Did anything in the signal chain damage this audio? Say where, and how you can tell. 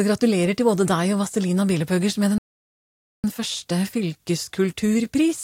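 Yes, at the playback stage. A playback stall silences the sound abruptly from 2.38 to 3.24 s. The gap lasts about 0.86 s, in mid-flow. The player likely ran out of data, or its thread was blocked until it recovered.

Time-compressed catch-up follows, from 3.24 s to the end. The sound runs about 1.1 times fast, but its pitch stays normal. The player is clearing its backlog by cutting small pieces and cross-fading the joins.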